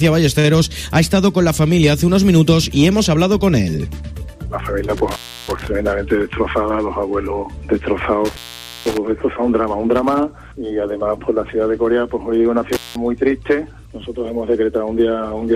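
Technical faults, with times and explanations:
0.39–0.46 s, short stall from a late packet: A packet missed its playout deadline and the jitter buffer ran dry, so the receiver held the last stretch of sound for about 46 ms until the packet turned up, then resumed from the same point. Nothing is lost, but the sound just before the gap hangs on unnaturally, with a slight buzzy smear or dip, and everything after it plays 46 ms later than before.
4.97–5.67 s, 8.25–8.97 s and 12.73–12.96 s, intermittent contact: A loose cable or plug opened briefly three times, breaking the signal path for about 324 ms, 492 ms and 189 ms. Each break starts and ends with crackle where the connection scrapes open and shut. While the line is open the sound drops out or breaks up, leaving faint hiss. The longest break is near 8.3 s.
6.15–7.03 s, jitter buffer speed-up: The jitter buffer held more audio than its target. 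To bring the delay back down, the receiver repeatedly cut out short pieces one or a few pitch periods long, removing about 50 ms in total. Over this stretch the audio runs about 5% fast with its pitch unchanged, so it sounds slightly hurried and its timing tightens unevenly.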